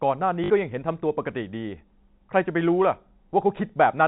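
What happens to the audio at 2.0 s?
Nothing goes wrong at 2.0 s: the speech carries on intact through that moment, with only the steady 4 kHz ceiling and faint level-following hiss of G.711 telephone coding that runs through the whole call.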